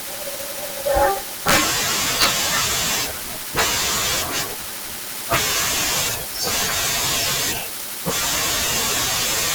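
At 1.50–1.56 s and 2.22–2.26 s, integer overflow: speech peaks about 5 and 4 dB over full scale wrap to the opposite sign, giving harsh cracks, vertical full-height waveform jumps and broadband spectrogram streaks.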